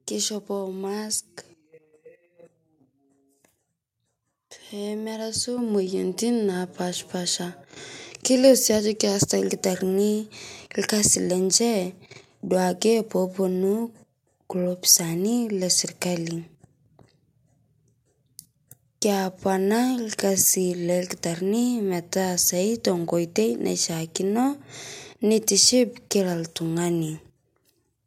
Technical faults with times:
5.58 microphone volume stepped up

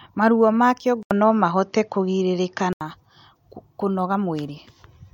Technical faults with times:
1.03-2.81 input switched to a poorer device

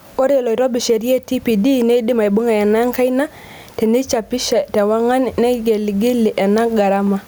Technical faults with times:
0.00-7.27 gain pumping

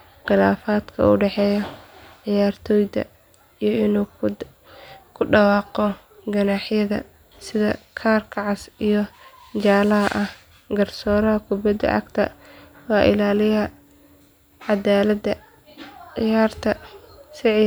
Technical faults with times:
none

